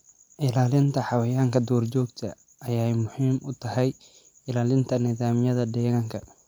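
No technical faults can be heard anywhere in the recording.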